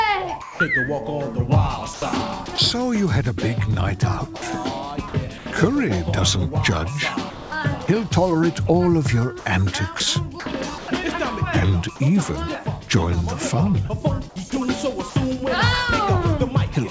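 At 0.42 to 0.60 s the sound is dropped by the voice detector: about 180 ms is replaced by steady comfort noise, and roughly 110 ms of real sound is lost. The likely cause is the sender's detector mistaking the sound for background and briefly ceasing transmission. In the waveform the envelope collapses to a thin, even band, and the spectrogram shows a flat, featureless noise patch. The sound is also chopped by the voice detector at 1.94–2.58 s, 4.36–5.46 s, 7.30–7.88 s, 9.40–10.88 s and 14.50–15.16 s, with 80 to 240 ms per stretch swapped for synthetic fill. This is likely the detector toggling on and off, so parts of the sound are replaced by comfort noise. On a spectrogram these stretches show as a striped alternation of detailed and smooth texture, all below an 8 kHz ceiling consistent with a G.722 call path.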